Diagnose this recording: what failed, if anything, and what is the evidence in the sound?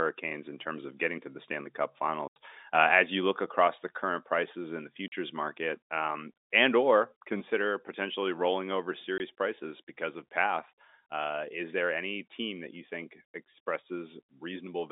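Network stage: packet loss filled with silence. Hard-edged gaps at 2.28–2.36 s, 5.08–5.12 s, 9.18–9.20 s and 13.34 s. These gaps last 80, 40 and 20 ms, multiples that fit 20 ms packets.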